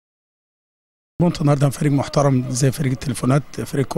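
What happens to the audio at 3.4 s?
Nothing goes wrong at 3.4 s; the audio there runs on intact, with no dropout, click or other fault to be heard.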